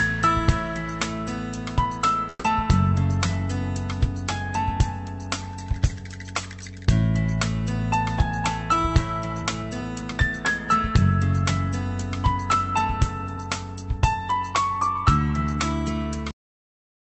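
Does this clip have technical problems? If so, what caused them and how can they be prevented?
Yes. Between 2.29 and 2.46 s there is a call audio freeze. Packets most likely stalled in transit and the jitter buffer ran dry. The receiver stretched the last sound into a fading buzz or hiss, then about 20 ms of silence, and resumed where it stopped, adding a 150 ms gap. A deeper jitter buffer or a steadier network path would absorb such stalls.

From 9.42 to 11.02 s comes a jitter buffer speed-up. The buffer had filled past its target, so the receiver repeatedly cut pitch-period slices, about a tenth of a second in all. The sound runs 6% fast at unchanged pitch and feels hurried. Smoother packet delivery prevents the backlog that triggers this.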